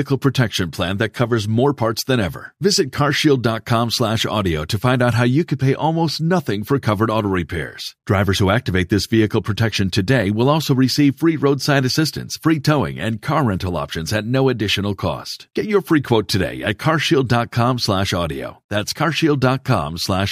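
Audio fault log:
No audible faults detected.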